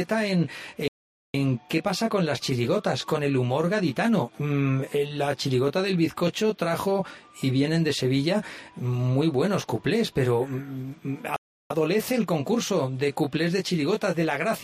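The sound cuts to silence from 0.88 to 1.34 s, and again from 11.36 to 11.70 s, then resumes: a playback stall, likely the player starving for data or its thread being blocked.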